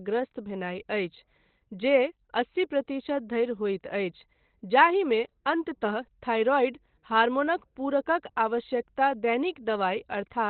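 From start to finish the speech sounds muffled and hoarse, with nothing above 4.2 kHz and a heavily damaged, thin quality. This is likely Opus compression running in its narrowband SILK speech mode, consistent with a rate near 12 kbps, which discards the upper band.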